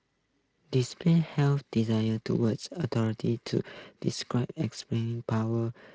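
No technical faults detected.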